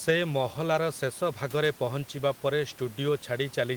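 The clip is speech, and nothing is technically wrong with it.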